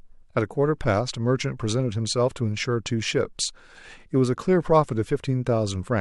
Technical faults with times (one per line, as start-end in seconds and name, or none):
none